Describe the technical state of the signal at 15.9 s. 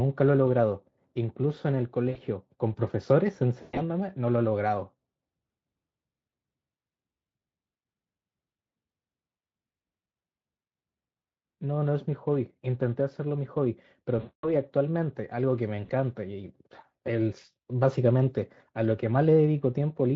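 VoIP packet loss concealment runs from 15.85 to 15.91 s. About 40 ms of packets went missing. The decoder extrapolated, producing a brief stretched, fading smear.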